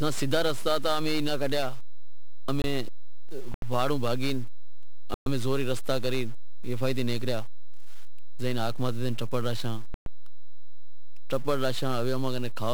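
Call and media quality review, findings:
DC offset, whole clip: waveform sits off the zero line by a constant; spectrogram shows steady energy in the lowest bin. Likely a capture or processing stage without high-pass, eating headroom.

1-bit DFPWM compression, whole clip: speech fuzzy and crackly, treble buried in hiss; spectrogram shows a dense broadband noise floor. One bit per sample, consistent with a 48 kbps stream, heavy quantisation damage.

Block of digital silence at 2.62–2.64 s, 3.54–3.62 s (just before "واڑو بھاگی"), 5.14–5.26 s, 9.94–10.06 s: hard cuts to zero with no fade; flat-line gaps on the waveform. Probable output-buffer underrun.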